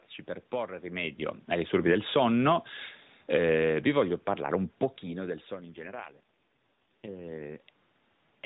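A mobile-call speech recording carried over the AMR narrowband codec, so nothing above 4 kHz comes through. The first fault is automatic gain falling. It starts at 1.55 s, right after "per porre rimedio ai", and runs to 5.33 s. The gain control judged the input too loud, or its background noise too strong, and pulled its gain down slowly, by about 6 dB. The voice and the room noise behind it sink together. That shared drop sets it apart from the talker shifting position near 1 s and 4.5 s. The second fault is an AMR rate drop, from 5.56 s to 7.62 s. The bandwidth stays the same and there is no gap. But the voice turns buzzy and synthetic, and the background noise starts to warble. This fits the network forcing the codec down from 12.2 kbps to 4.75 kbps on a weak radio link. That rate spends more bits on error protection and fewer on the voice. The roughness lasts until the rate climbs back.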